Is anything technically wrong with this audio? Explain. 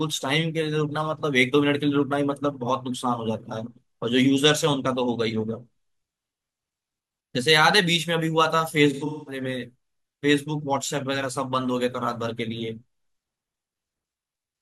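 Yes, there's AAC frame loss with concealment between 8.93 and 9.42 s. About 300 ms of audio is missing, scattered over roughly 340 ms, with the longest gap around a fifth of a second. The decoder patches these gaps by recycling the last good spectrum, so that stretch sounds smeared, noisy and a bit phasey.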